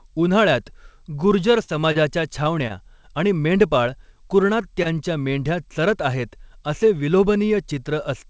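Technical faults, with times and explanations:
1.64–1.71 s and 1.92–1.98 s, short concealed packet loss: about 40 ms of audio went missing each time, and the receiver papered over it by extending the last sound for roughly 35 ms before blending back. You hear a quick smear or wobble, and a brief sound can drop out.
2.68–2.73 s and 4.83–4.95 s, short stall from a late packet: the jitter buffer ran dry, so the last sound got stretched (about 18 ms, then 23 ms) until the packet showed up. Nothing's lost; it's a held sound with a faint buzz or dip, just before "आणि मेंढपाळ कुरणात" and just before "मेंढ्या चरत".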